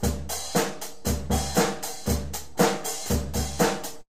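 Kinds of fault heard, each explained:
Nothing here stands out as a technical fault; the sounds in the clip come across without any glitch, dropout or distortion catching the ear.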